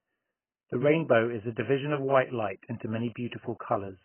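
AAC compression, heavy, throughout the clip: nothing reaches above about 3.1 kHz, and the speech sounds dull, smeared and fizzy on sibilants. This is likely AAC-LC at a very low bitrate, near 14 kbps, where the encoder lowers its cut-off and starves the remaining bands of bits.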